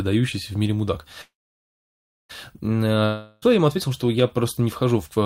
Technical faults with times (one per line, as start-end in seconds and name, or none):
1.21-2.31 call audio freeze
3.05-3.44 long network dropout